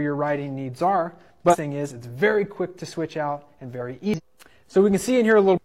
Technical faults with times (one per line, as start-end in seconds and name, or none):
1.49-1.56 damaged data in a compressed stream
4.14-4.20 damaged data in a compressed stream
5.53-5.58 damaged data in a compressed stream